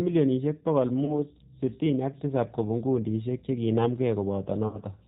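Throughout, the G.729 codec's 8 kbit/s rebuild cuts everything above 4 kHz and leaves plainly audible roughness and a synthetic edge, not the clean dullness of plain filtering. At 1.05 to 1.12 s, and again at 4.68 to 4.78 s, VoIP packet loss concealed by the speech codec fills gaps of about 30 ms and 60 ms with a fading extrapolation instead of silence, and the sound stays weak briefly afterwards.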